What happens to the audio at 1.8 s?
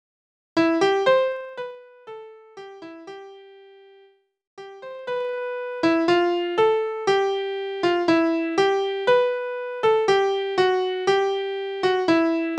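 Zipper noise runs from 1.28 to 1.79 s. The level drops about 20 dB in unsmoothed 2 dB steps, some twenty a second, each ticking audibly.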